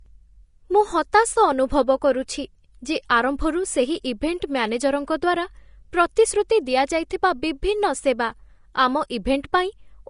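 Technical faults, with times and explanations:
Throughout: Vorbis compression. A low-bitrate encode, likely Vorbis at around 35 kbps, removed everything above 10.5 kHz and coarsely quantised the remaining treble, so the speech sounds dull yet hissy and grainy, with roughened tones and smeared consonant attacks.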